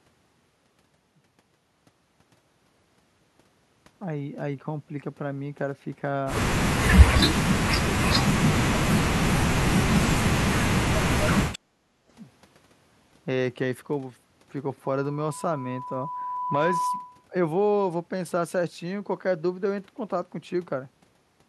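From 7.26 to 9.26 s the voice keeps sinking and chopping out, with drops of something like 40 dB, and it happens again at 9.42 to 9.98 s and 10.6 to 11.36 s. That pattern is most likely speech suppressed in double talk. The far end was talking at the same time, the echo canceller couldn't tell the local talker from its own loudspeaker echo, and it clamped down on both.

Right after that, from 11.64 to 12.09 s, the room background itself dips by about 10 dB for roughly half a second and then comes back. That's the background gated by the echo canceller. While the loudspeaker was playing, the canceller pulled the microphone down hard to keep echo out, and it took the room tone with it until it released.

Then at 14.84 s a loudspeaker feedback squeal starts. It's a single tone at 994 Hz that swells over about two seconds until it's roughly as loud as the speech, and it runs until 17.27 s. The mic was hearing the loudspeaker it feeds, and around that frequency the loop gain went past one, so the tone kept feeding itself and grew instead of dying away.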